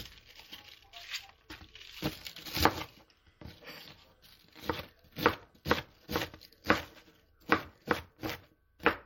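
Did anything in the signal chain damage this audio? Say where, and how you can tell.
Yes. Throughout, watery, swirly codec damage and nothing above 16.6 kHz, a flat ceiling on a spectrogram, point to likely MP3 compression at a low bitrate near 48 kbps.

From 3.01 to 5.99 s, computer activity noise buzzes at roughly 300 Hz, faint, around 45 dB down. It shows as spectrogram stripes, from load currents disturbing the analogue ground.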